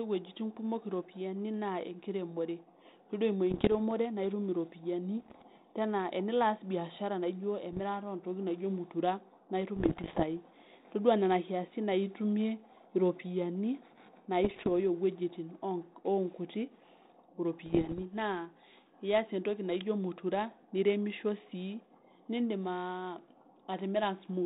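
Pops and rough, gritty bursts with brief jumps in level break through at 3.50 to 3.72 s, just after "naa enkiremore todua eimu"; at 5.20 to 5.43 s, after "naa itum iropiyiani"; at 7.73 to 7.81 s; at 9.76 to 10.24 s, following "ntokitin naijo mutira naa"; at 14.44 to 14.69 s; and at 17.66 to 18.03 s. These are bit errors on an ADPCM link, with roughly 0.7 to 1.5 percent of bits flipped. Each flipped bit throws off the decoder's step size and prediction, so the damage rings on for milliseconds instead of staying a single click, inside an otherwise 4 kHz-limited telephone band.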